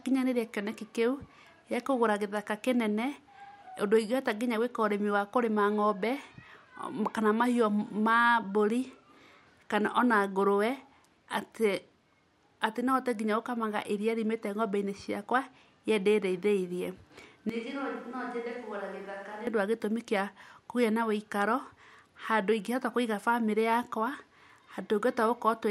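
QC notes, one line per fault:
17.49–19.47 s: switch to a distant microphone. The speech turns roomy and hollow at once and loses its bass. Its level falls by about 10 dB. Room noise rises to about 25 dB below the speech. The close pickup has likely dropped out. A microphone further away then carries the sound, hearing more of the room. The change and the return are both abrupt.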